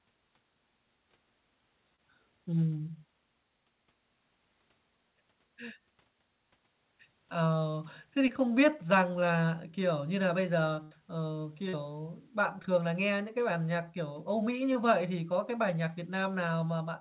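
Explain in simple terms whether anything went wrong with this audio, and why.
Short concealed packet loss occurs four times, at 1.96–2.00 s, 8.28–8.31 s, 11.69–11.75 s and 14.73–14.77 s. Small pieces of the call arrived too late, and the receiver papered over each gap by stretching the preceding sound, leaving a brief smear or wobble.

A burst of packet loss hits at 10.83–10.93 s. About 80 ms of audio is gone, and the receiver fills that gap by extending the last sound while fading it down. This gives a held buzz or fading hiss before the audio picks up further on.

The call path's telephone-style coding cuts off everything above 4 kHz, which gives the narrow phone-line sound.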